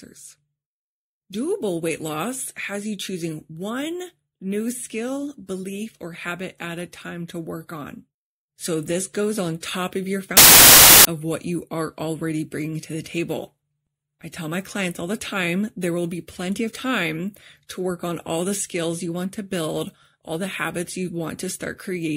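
A speech clip with one burst of samples built from the wrong bytes, from 10.37 to 11.05 s, between "on top of your" and "of what you are". For about 0.68 s the bytes of each sample are combined wrongly, so the fast-changing low bits become the large part of each value, and the audio turns into loud, harsh broadband noise.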